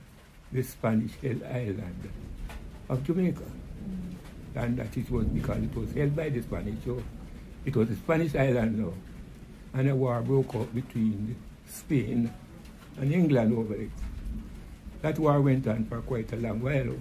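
Nothing here stands out as a fault, so there's really nothing to flag in this one.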